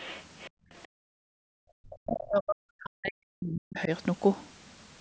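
Other side's voice leaking through at 0.0–0.23 s, 0.4–0.5 s, 0.83–0.87 s and 2.21–2.27 s: faint second-voice scraps, roughly 25 to 40 dB below the talker, likely loudspeaker echo the canceller missed. Background gated by the echo canceller at 0.5–0.7 s and 0.87–1.5 s: room sound falls away by about 40 dB while the loudspeaker plays. Speech suppressed in double talk from 1.78 to 3.9 s: the talker's voice dips very deeply and breaks up, likely because the canceller mistook it for echo.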